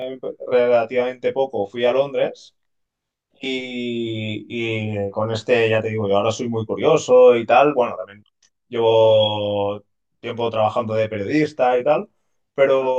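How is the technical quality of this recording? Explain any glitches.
The speech is compromised by one fault present for the whole recording. Channel delay (comb filtering) runs from start to finish: one channel trails the other by around 20 ms, and the mono sum cancels at evenly spaced frequencies from around 30 Hz upward. The result is a rough, slightly doubled sound. Unlike room reverberation, it adds no tail after the sound stops, and the notches stay fixed rather than sweeping as in flanging.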